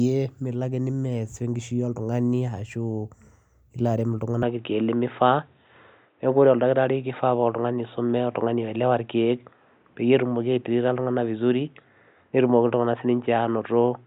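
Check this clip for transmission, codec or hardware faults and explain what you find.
One fault. From 4.43 s to the end, the input likely switched to a poorer device: the speech turns dull and boxy with nothing above 3.8 kHz, jumps a few decibels in level without a gap, and gains a faint new noise floor.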